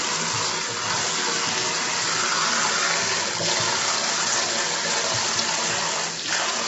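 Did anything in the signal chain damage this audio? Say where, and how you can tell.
Yes, the damage happens at the codec stage, and it runs through the whole clip. The sound is rough and grainy from start to finish. A noisy haze fills the gaps between tonal components, and nothing survives above about 7.8 kHz. The likely cause is low-delay AAC compression, of the AAC-ELD kind used for calls. Its short frames resolve fine pitch structure poorly and spend bits inefficiently. The heavy damage fits a low bitrate, around 16 kbps.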